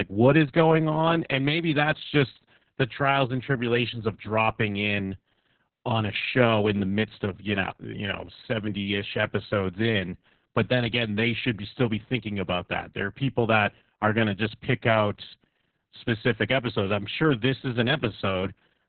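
From start to finish the speech sounds muffled, hoarse and faintly robotic, with nothing above about 4.3 kHz. This is heavy Opus voice compression. The encoder ran in its SILK linear-prediction mode at narrowband, dropping the upper frequencies and coding the excitation signal very coarsely, which fits a bitrate of around 6 kbps. That coarse excitation is what turns the voice rough and mechanical.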